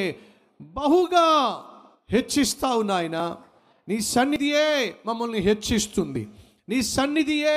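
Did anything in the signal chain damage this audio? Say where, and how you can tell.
Yes. At 3.2 s, 4.36 s and 6.16 s the speech jumps ahead with no silent gap, losing roughly 20, 40 and 20 ms. This points to the driver or buffer stage, likely a dropped buffer (overrun). A network dropout would leave silence instead.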